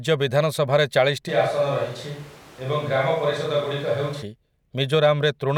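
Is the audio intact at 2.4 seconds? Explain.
No. From 1.3 to 4.21 s the speech abruptly turns roomy and hollow, loses bass, drops by roughly 5 dB, and sits over a room-noise floor only about 25 dB below it. This is likely a switch to a distant microphone, with the close microphone's signal lost and a far pickup hearing more room than mouth. Unlike added reverb or plain filtering, the change is sudden at both edges, and the quieter level and louder background arrive together.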